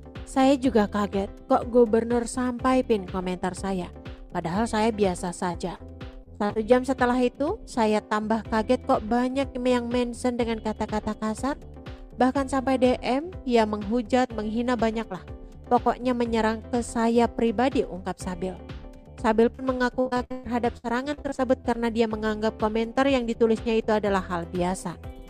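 At 5.51 s and 5.75 s, short concealed packet loss: about 20 ms and then 40 ms of data arrived too late, and the decoder extended the preceding sound across each hole before blending back. Both come through as brief smears. The same fault recurs at 19.56 s, with a 20 ms hole.

From 6.24 to 6.58 s, repeated packet loss (robotic sound) sets in. There are four gaps, none longer than 40 ms, and together they fill about a third of the span. The fault returns from 20.00 to 21.69 s with twelve gaps, the longest about 113 ms. In both stretches the back-to-back patching makes the sound choppy, with pieces missing.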